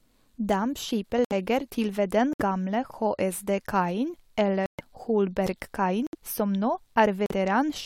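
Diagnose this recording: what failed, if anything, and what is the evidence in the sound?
Five abrupt dropouts cut the speech into hard-edged silence with no timing shift: 1.25–1.33 s (before "til ved"), 2.33–2.41 s (after "til ved"), 4.66–4.81 s, 6.07–6.15 s, and 7.26–7.32 s (after "som nå"). This is corrupt frame muted at the codec stage. The decoder rejected bit-damaged compressed frames and the player substituted silence. The gaps run 56 to 148 ms, spanning two to six whole frames.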